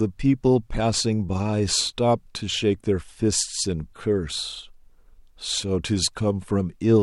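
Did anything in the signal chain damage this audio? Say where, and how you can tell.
No, nothing in the signal chain damaged this speech recording. I can't point to any stage where the audio goes wrong, and nothing in the sound suggests trouble anywhere along the path.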